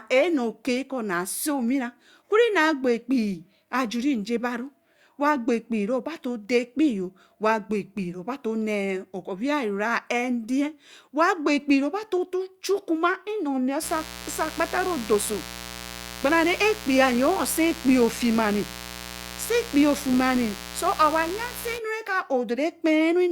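A speech recording carries a mains buzz from 13.80 s to 21.80 s, sitting about 15 dB below the speech. Unlike a smooth low hum, it is raspy, because sharp switching spikes, twice per 60 Hz cycle, spread harmonics up to several kHz.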